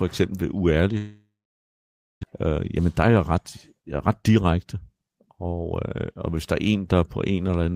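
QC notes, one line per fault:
0.97–2.25 s, long network dropout: the stream likely stopped arriving for about 1 s, and the receiver stretched the last sound into a fading buzz, then left about 0.92 s of near-silence. Speech returns with that second gone, now running roughly a fifth of a second later.
2.45–5.10 s, jitter buffer speed-up: the buffer was holding more audio than its target, so the receiver repeatedly cut out short pieces one or a few pitch periods long, removing around a fifth of a second in total. Speech runs at 108% speed with unchanged pitch and sounds hurried.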